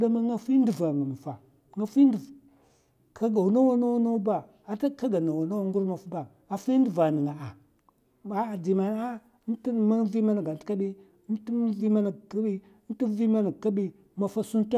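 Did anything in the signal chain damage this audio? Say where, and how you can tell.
No, none of the stages between capture and playback left any audible damage on this speech recording.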